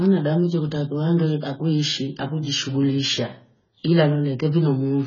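From start to finish, the speech is dull and smeared. Nothing is heard above 7 kHz, so sibilants lose their edge and sound fizzy. Sustained sounds carry a warbling texture. This is likely AAC compression, with heavy damage that fits a very low bitrate of around 16 kbps. Starved of bits, the encoder lowered its cut-off.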